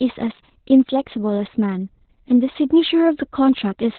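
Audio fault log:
Throughout: Opus voice compression. The speech is muffled, hoarse and faintly robotic, which fits SILK narrowband coding at about 8 kbps. On a spectrogram, energy stops sharply near 4.4 kHz, and the harmonics below look smeared and grainy from coarse excitation coding.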